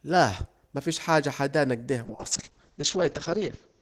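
At 2.11 s, just after "مفيش حاجة حدانا اكده", a call bitrate drop begins and runs to the end. The encoder gets far fewer bits, which points to a fall from 32 to 7 kbps. Coding turns coarse. Highs above 8 kHz vanish. Speech sounds muffled and watery.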